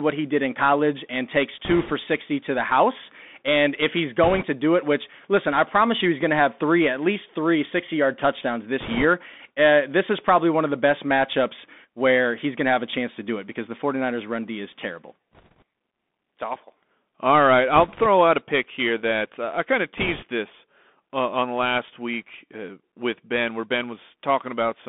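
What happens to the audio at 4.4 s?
At 4.4 s the audio is inside a burst of bit errors on a Bluetooth voice link, running from 4.23 to 4.45 s. Roughly 3 percent of bits are flipped, which lays a rushing, crackly noise over the speech without loud clicks. The whole clip also carries the Bluetooth CVSD headset codec, which confines the sound to about 200 Hz to 3.6 kHz, roughens sibilants, and leaves a granular hiss under the speech.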